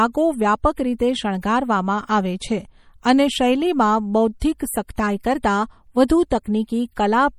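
Right from the start the speech has a plainly audible watery, swirly texture: the likely cause is MP3 compression at a low bitrate, around 48 kbps. Starved of bits, the encoder throws away weak frequency lines, and they flicker in and out from frame to frame, which gives the s sounds that metallic, chirpy edge. There's also nothing above about 19.7 kHz, where the treble has been cut off.

On top of that there are four brief pre-echo spots, at 0.99, 4.40, 4.96 and 6.08 s; the one at 4.40 s comes right after "આવે છે અને શૈલીમાં". Each time a sharp onset lands late in a codec block, the noise budget meant for the loud part leaks into the quiet moment just before it, so you get a short hiss of about 13 to 19 ms ahead of the attack, and the attack itself sounds softened and smeared.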